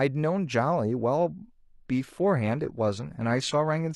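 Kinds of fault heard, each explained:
Adaptive stream at a lower bitrate: from about 1.2 s to the end of the speech, the quality drops suddenly with no gap. Codec artefacts grow, which fits a switch from roughly 96 kbit/s AAC to a 24 kbit/s HE-AAC version as the connection slowed. Unlike a dropout or buffer underrun, nothing goes missing. The audio runs on seamlessly, only at lower fidelity.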